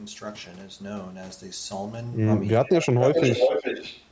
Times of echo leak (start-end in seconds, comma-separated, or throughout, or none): 2.65-2.69, 3.01-4.05